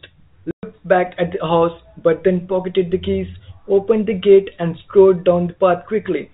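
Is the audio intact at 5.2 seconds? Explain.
Yes, at 5.2 seconds the speech runs on without any break or damage, carried only by its ordinary G.711 telephone coding, which keeps it within the band below 4 kHz.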